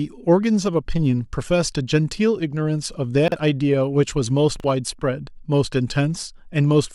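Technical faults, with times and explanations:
3.28–3.36 s and 4.56–4.64 s, chunks out of order: brief jumbled moments, where two 40 ms pieces play swapped, leaving three hard joins.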